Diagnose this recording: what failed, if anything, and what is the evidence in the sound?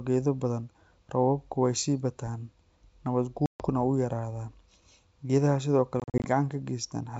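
The failure is at the network stage: packet loss on an ADPCM call, here over a G.722 wideband link whose coding itself sounds clean. From 3.46 to 3.66 s about 140 ms of speech drops to silence, which fits roughly seven lost packets. From 6.00 to 6.25 s another 140 ms is lost as gaps scattered over 240 ms, the longest 40 ms. Each gap is a hard-edged flat line in the waveform and a blank vertical band on the spectrogram. The decoder's predictor and step size then lag the sender's, so the sound resumes slightly distorted before settling.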